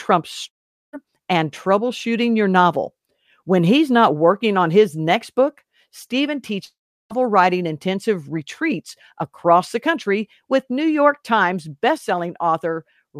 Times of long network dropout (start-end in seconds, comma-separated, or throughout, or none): 0.47-0.95, 6.65-7.24